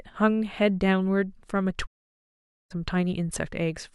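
At 1.85 s the receiver lost the digital signal and muted, a digital broadcast dropout. The speech fades in 20 ms and stays silent until 2.72 s.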